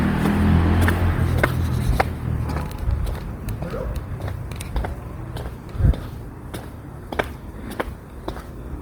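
Across the whole clip the sounds come out grainy and rough, with tonal parts turned noisy, yet the top end stays open to about 20.4 kHz. This is likely Opus compression in its music mode, filling starved bands with noise, which fits a low rate near 24 kbps.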